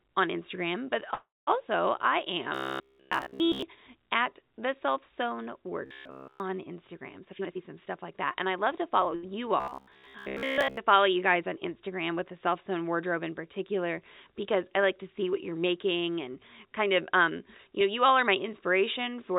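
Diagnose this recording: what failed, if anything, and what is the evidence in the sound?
The jitter buffer ran dry from 1.14 to 1.49 s, likely because packets were held up on the network. This call audio freeze continues the last sound as a fading buzz that drops to silence for about 0.21 s. The speech then resumes where it stopped, delayed by 0.33 s.

In the buffer stage, new audio likely arrived too seldom, so the receiver looped short fragments. This caused robotic sound from repeated short buffers at 2.55–3.62 s, 5.86–6.40 s (after "at the self sewn") and 9.60–10.77 s (before "to follow you guys"). The 66.8 Hz metallic buzz fits repeats of roughly 15 ms. The middle stretch is entirely looped, and the others mostly are.

The jitter buffer then held too much audio and trimmed pitch periods to catch up. This jitter buffer speed-up runs at 139% from 7.20 to 7.73 s, dropping about 0.2 s, and at 104% from 8.14 to 9.06 s. 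It runs at 107% from 16.04 to 18.07 s, between "to see what you're" and "are my". The speech is hurried at unchanged pitch in the first and last of these.

A late packet left the buffer empty at 9.15–9.25 s. This short stall from a late packet stretches the last sound for 76 ms, giving a held moment with a slight buzz or dip before playback continues with nothing lost. It sits within the G.711 call path's 4 kHz bandwidth.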